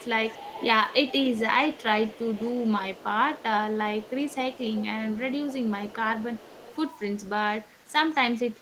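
From 0.0 to 3.44 s a faint delayed copy of the speech trails the original by 240 ms, about 20 dB down. This is echo leak, likely from a far-end loudspeaker whose echo canceller let part of the microphone pickup return down the line. Overlapping that stretch the speech dips at 0.05–0.13 s, 1.43–1.93 s and 2.75–3.58 s, losing level in brief pieces, by roughly 15 to 25 dB at worst. This is speech suppressed in double talk, likely because overlapping talk made the canceller attenuate the near talker along with the echo. The echo leak returns at 4.02–6.76 s with the same 240 ms delay and low level. A final suppression dip of around 20 dB comes at 7.82–7.95 s.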